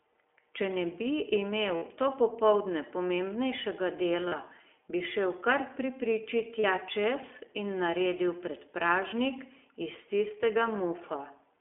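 Throughout, the speech sounds thin, boxed in and a little rough and synthetic, with nothing outside roughly 300 Hz to 3.4 kHz. That is the iLBC codec: each short frame is coded independently at narrowband, and the plainly audible damage fits its 15.2 kbps, 20 ms frame mode.

At 1.76 s a held, slightly buzzy vowel-like smear replaces the speech for about 60 ms, and at 4.28 s and 6.60 s for about 40 ms each. These are lost iLBC frames, where the decoder repeats the last pitch cycle with added noise. Speech comes back cleanly right after each gap.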